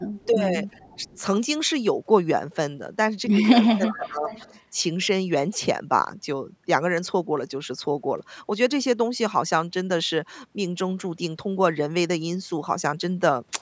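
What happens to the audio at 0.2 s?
A faint, delayed copy of the sound runs underneath from 0.1 to 0.27 s, trailing the direct signal by about 0.37 s and sitting roughly 35 dB below it. This is an echo leak, most likely from a loudspeaker whose sound reached the far-end microphone and slipped past the echo canceller. On a spectrogram it shows as a weak ghost of the earlier harmonic pattern, offset in time. On the waveform it barely registers beside the main signal.

Right after, from 0.27 to 0.39 s, the speech is suppressed in double talk: the level dips by around 10 dB in pieces totalling about a tenth of a second. The likely cause is the echo canceller turning down both its own talker and the echo when both sides overlapped. The waveform shows brief pinched-in stretches. The spectrogram shows thinning bands below the 8 kHz ceiling set by the call's microphone processing.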